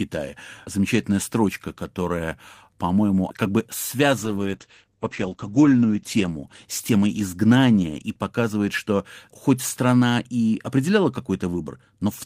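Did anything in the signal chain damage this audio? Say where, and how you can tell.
Yes, a call bitrate drop in the codec, 4.19 to 9.85 s: the spectrogram's top edge falls from 20 kHz to 8 kHz and coarse, watery coding points to about 12 kbps.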